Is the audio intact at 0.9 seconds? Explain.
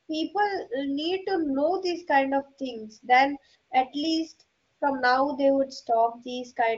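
Yes, the speech at 0.9 seconds is intact, with no fault at that moment.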